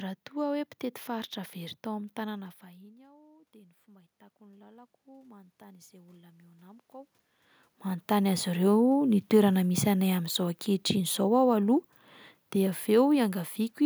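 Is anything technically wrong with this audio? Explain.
Yes. From 2.34 to 7.21 s there is automatic gain rising. The level at the microphone fell by about 24 dB around 2 s, after the talker moved back, and the gain control then climbed about 9 dB, so the voice and room noise swell together. On the waveform the envelope widens steadily, and the spectrogram's noise floor brightens with it.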